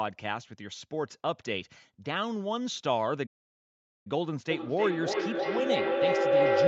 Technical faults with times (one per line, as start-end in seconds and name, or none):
3.26-4.07 playback stall
4.50-6.67 feedback howl